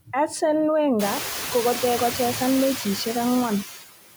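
Across the whole clip the background noise pumps: it drops away in the gaps between words and swells back up underneath the speech. This is noise suppressor artifacts. The suppressor estimates which frequency bands hold steady noise and pulls them down frame by frame, here by about 10 dB, so the noise floor tracks the speech. Around one second in the room noise climbs by about 21 dB, reaching about 9 dB below the speech.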